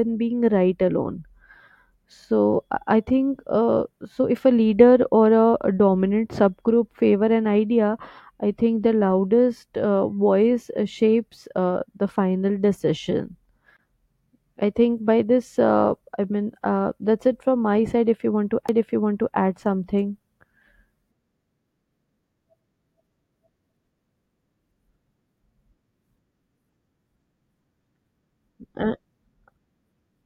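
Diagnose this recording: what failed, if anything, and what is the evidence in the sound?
A CD skip at the playback stage: the laser jumped tracks at 13.77 to 13.79 s and again at 18.68 s, between "that's it from my" and "add something". Each causes a roughly 15 to 20 ms mute, then speech resumes elsewhere on the disc, visible as a thin gap and broken harmonic traces.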